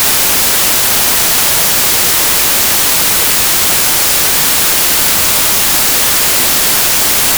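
Samples written as 32-bit integers are being read back as packed 24-bit integers for the whole clip, a wrong sample width that splices mismatched bytes together. The result is loud noise with the original sound buried underneath, running at 0.75 times speed and lowered in pitch.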